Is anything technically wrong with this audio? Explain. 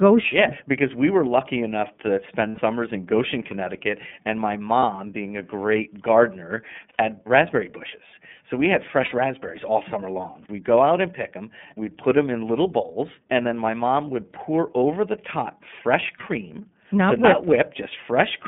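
Yes. The speech has been carried over an iLBC codec link, and five stretches were lost in transit. The link's band runs from about 150 Hz to 3.5 kHz, and the codec uses iLBC's 30 ms frame mode. Everything above that is cut, leaving the voice boxy, slightly rough and plainly synthetic throughout.

Lost iLBC frames occur at 2.49 s after "were lucky enough to" (90 ms), at 4.79 s between "and my" and "being a great gardener" (30 ms), at 6.89 s (90 ms), at 9.05 s between "we had" and "raspberries all summer long" (60 ms), and at 16.17 s (30 ms). Each time, the decoder filled the gap by repeating the last pitch cycle blended with noise. This produces a brief held, buzzy vowel, with the voice returning almost immediately afterwards.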